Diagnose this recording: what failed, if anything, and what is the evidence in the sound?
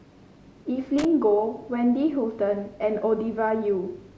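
Loose connector crackle in the analogue wiring: from 0.98 to 1.05 s the speech is broken by a short, irregular burst of scratchy crackle lasting about 65 ms. A worn or dirty contact is making and breaking as it shifts, chopping the signal on and off. The uneven, gritty texture separates it from a digital dropout or buffer glitch, which would give clean silent gaps or evenly spaced clicks.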